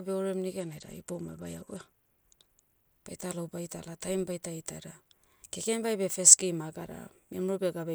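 Speech, with a Bluetooth SBC bit pool drop from 0.61 to 2.89 s. Over that stretch the treble goes dull and a gritty, grainy noise rides under the speech, then clears as the rate recovers. On a spectrogram the upper bands thin out or go empty while the lower bands turn speckled with quantisation noise. The waveform barely changes. The sound points to the encoder cutting its bit pool from around 28 to 11, roughly 90 kbps, on a congested link.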